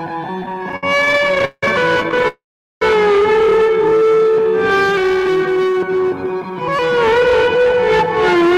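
Music that drags and stutters from 0.43 to 1.63 s, with 26 brief hitches, the longest 175 ms, filling about 490 ms. That is repeated stalls (stutter): packets arrived late, so the jitter buffer kept emptying and the receiver extended the last sound until data resumed. A lighter burst follows from 2.00 to 2.25 s, with eight gaps of at most 12 ms. From 2.28 to 2.82 s the music halts in a call audio freeze. The held sound fades and leaves about 410 ms of silence before playback resumes where it stopped, adding a 534 ms gap. This is likely caused by packets delayed in transit draining the buffer. From 5.79 to 8.52 s the music runs hurried at 106% speed with unchanged pitch, losing its steady tempo. This is a jitter buffer speed-up: the receiver trimmed short pitch-period slices, roughly a fifth of a second in total, to cut the built-up delay.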